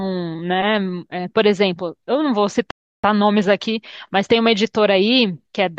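At 2.71 s the speech halts in a rebuffering stall: the player exhausted its downloaded audio and waited. Silence lasts until 3.04 s, adding 0.33 s, then speech resumes exactly where it stopped. Unlike a dropout, nothing is missing; the sound is only delayed.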